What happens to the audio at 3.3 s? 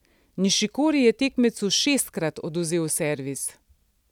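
Nothing goes wrong at 3.3 s; the speech runs through that moment intact, with no dropout, click or other fault to be heard.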